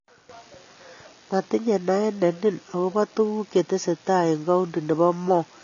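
Throughout, the speech sounds dull and smeared, with nothing above 6.9 kHz. This is likely AAC compression, with a low bitrate near 24 kbps dropping the top band.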